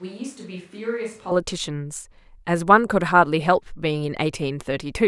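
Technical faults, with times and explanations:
0.00 to 1.31 s, switch to a distant microphone: The speech is already roomy and hollow when the clip begins. It is thin in the bass and about 10 dB quieter than what follows. Room noise sits roughly 30 dB below the speech. At 1.31 s the sound snaps to a close, full, drier tone. The likely cause is a missing close-microphone feed, leaving a far-off microphone that picks up more room reflection and less low end.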